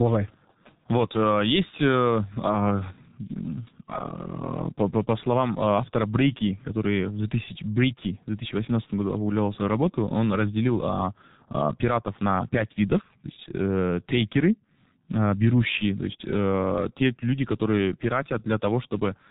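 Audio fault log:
throughout, G.723.1 codec: speech is muffled and hoarse with blurred consonants, from heavy coding at about 6.3 kbit/s that drops everything above 4 kHz.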